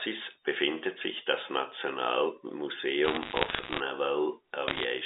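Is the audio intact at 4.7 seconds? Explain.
No. Bit errors on a digital phone line hit from 4.68 to 4.84 s. Flipped bits corrupt single samples, so sharp ticks crackle over the speech.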